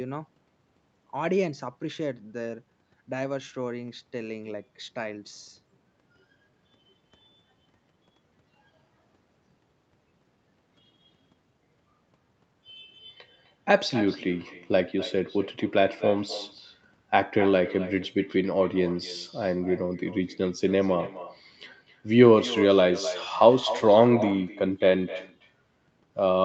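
Speech throughout this recording is shadowed by an echo with no canceller: a quieter, thinner copy trails each phrase by around a third of a second at about 15 dB below the speech. On a waveform, every burst carries a smaller delayed twin. On a spectrogram, each syllable is smeared by a faint offset duplicate. The far end's loudspeaker feeds its microphone, and nothing removes that loop. The spectrum stops at 8 kHz, consistent with a wideband call codec.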